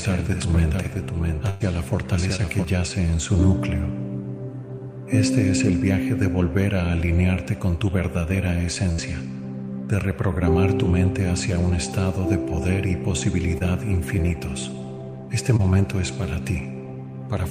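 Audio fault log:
0.00–2.65 s, doubled audio track: a second full-band copy, about 5 dB quieter and roughly 0.7 s behind, runs from the start and cuts off abruptly at 2.65 s. It has no decay or room colour, so the likely cause is a slower second capture path or an edit holding two out-of-step copies.
1.49–1.62 s and 8.92–9.00 s, burst of packet loss: about 100 ms and 60 ms of audio never arrived in time. The receiver extended the last sound and faded it across each gap, giving a held buzz or fading hiss. Playback then resumes further on, with the stretch in between gone.
2.36–2.40 s, 13.58–13.62 s and 15.57–15.61 s, short concealed packet loss: roughly 20 ms went missing each time. The decoder bridged each hole by continuing the preceding sound and blending back into the real signal, so each spot is heard as a brief smear or wobble, and a very short sound may drop out.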